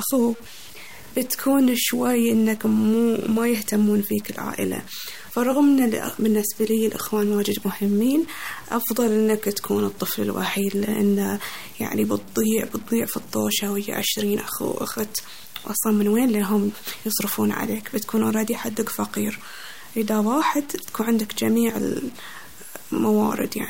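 From start to finish the speech carries a grainy, rough distortion that tracks the voice, sitting roughly 25 dB below it. Quiet syllables turn gritty and the softest tails sputter or drop out. This points to low bit depth without dither, likely from truncation to about 6 bits. Dithered reduction would leave a steady hiss independent of the signal. Here the error comes and goes with the speech, and the pauses fall silent.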